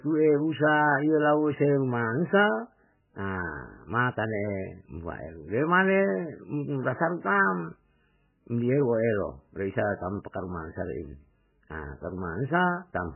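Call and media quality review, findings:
MP3 compression throughout: encoder likely starved of bits, with damage pointing to roughly 9 kbps. Treble cut at a fixed 3 kHz, weak frequency lines zeroed frame to frame. Speech dull, heavily watery and swirly, attacks smeared.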